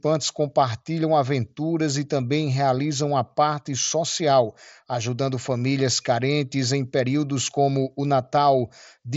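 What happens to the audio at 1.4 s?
Nothing goes wrong at 1.4 s: the speech there comes through intact, carried by the Bluetooth mSBC headset codec with its band ending near 7.7 kHz.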